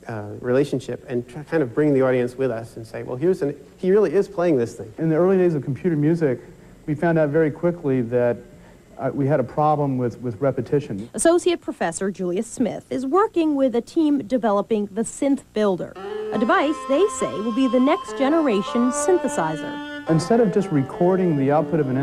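Clock drift between sender and receiver runs through the whole clip: the sender's clock is about 3% slow, so the receiver's buffer keeps draining. On a waveform or spectrogram nothing jumps out; the sign is a steady, low-level unevenness in timing rather than any single visible event.

Repeated timing corrections fill the stretch from 0.46 s to 21.91 s, where the receiver repeats short pieces to keep pace, adding roughly half a second in total and playing at 97% speed. Each small hiccup shows as a brief duplicated segment in the waveform and a tiny repeated column pattern in the spectrogram, spaced unevenly.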